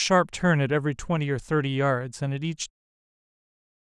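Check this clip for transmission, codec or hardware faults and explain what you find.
Nothing faulty can be heard in this speech.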